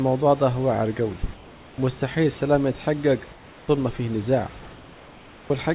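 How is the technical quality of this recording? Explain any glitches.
The recording has two problems: heavy-handed noise removal across the whole clip, and three pauses where the real background drops out. The audio has passed through a narrowband call path, so nothing reaches above 4 kHz.

Overdone noise removal runs from start to finish. The suppressor is set too aggressively. It pulls individual frequency bands down whenever they sit close to its noise estimate. Quiet parts of the speech fall below that line and vanish with the noise. Between phrases the background drops and breaks up into twinkling specks.

In three pauses, the background changes character. The most likely cause is comfort noise replacing the background. The first runs from 1.34 to 1.78 s, between "دع واعر جوي" and "مستحيل السلام يتحجج". The second runs from 3.32 to 3.68 s, before "ما فيه نزاع". The third runs from 4.62 to 5.5 s, after "ما فيه نزاع". 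When no speech is detected, the sender stops transmitting. The receiver then fills the gap with synthetic noise. The detailed room background becomes a smooth, featureless hiss, about 3 dB quieter in the first two gaps and about 2 dB quieter in the last.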